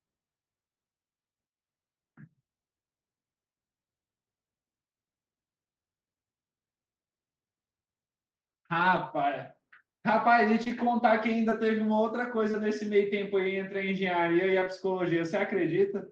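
From 8.79 to 8.97 s, about 100 ms of speech is a lost packet rebuilt from error correction. The five missing packets, which fit five 20 ms frames, were replaced by the low-bitrate backup copies carried in each following packet, so nothing drops out. The rebuilt stretch sounds grainier and noisier. On a spectrogram it shows as a smeared, blurrier patch with fuzzier harmonics, though the waveform keeps its envelope with no dip to silence.

Between 10.63 and 12.55 s come scattered short gaps: roughly four separate holes, the longest around 20 ms, totalling about 70 ms, or about 4% of that span. The receiver covered each one by extending the preceding sound. The speech stays clear but picks up brief ticks and hiccups. On a spectrogram these are thin vertical seams where harmonics briefly flatten or blur, and on the waveform small repeated or stretched cycles appear at each point.

At 14.59 to 14.63 s and again at 14.63 to 14.68 s, two back-to-back cases of short concealed packet loss fill about 20 ms each. 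The decoder continued the last sound, following its pitch where voiced or using shaped noise where not, then blended back in. The result is one brief smear or wobble of about 40 ms. It appears as a short, slightly washed-out block on the spectrogram, with a copied-looking cycle pattern in the waveform. Throughout, the Opus call path at 24 kbps caps content at 8 kHz.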